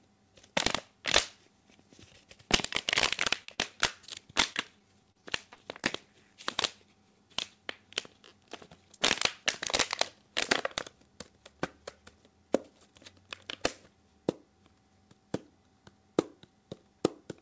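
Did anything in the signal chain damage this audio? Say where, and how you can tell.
Yes. At the network and jitter-buffer stage, a short concealed packet loss hits at 3.44 to 3.51 s: about 30 ms of audio never arrived, and the receiver filled 40 ms by extending the preceding sound before blending back. That leaves a brief smear where a short sound can disappear.

Right after, at 3.54 to 3.61 s, comes a short stall from a late packet. The jitter buffer emptied, so the receiver held the last sound for 41 ms until the packet turned up. Nothing is lost, but the sound drags slightly, with a slight buzz or dip.

From 4.53 to 5.86 s there is repeated packet loss with robotic sound. Six gaps, the longest 33 ms, total 150 ms missing and about 11% of that stretch concealed. Each patch continues the previous sound, giving a choppy texture with pieces missing. The G.722 call path cuts everything above 8 kHz.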